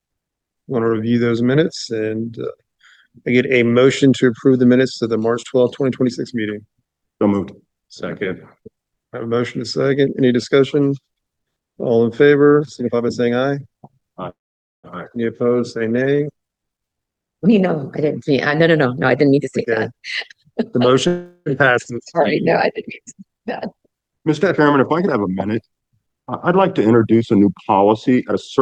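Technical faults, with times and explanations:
14.29 to 14.87 s and 21.07 to 21.49 s, call audio freeze: the sound stalls into a short fading buzz, then about half a second of silence the first time, while the second fill stays mostly buzz. This is likely packets held up until the jitter buffer ran dry. Playback resumes where it stopped, with nothing lost.
15.14 to 15.17 s, skip ahead: the audio lurches forward with almost no gap, and roughly a fifth of a second is simply gone. A stretch was dropped while later audio was already queued, so the two sides are spliced almost directly.
15.42 to 16.94 s, jitter buffer slow-down: the sound drags at about 87% speed with unchanged pitch, and sounds are stretched. Running low, the receiver repeated single pitch periods again and again, adding about 0.2 s to rebuild its reserve.
16.99 to 17.61 s, 18.05 to 19.93 s and 27.96 to 28.62 s, jitter buffer speed-up: the audio rushes at the same pitch, sharply at 156%, then at 107%, then at 128%. 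Too much audio was queued, so the receiver cut short pitch-period slices repeatedly, removing roughly 0.4 s, 0.15 s and 0.2 s.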